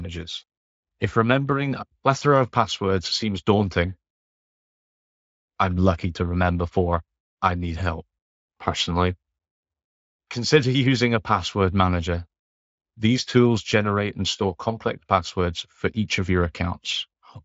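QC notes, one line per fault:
Nothing stood out on listening to this speech clip.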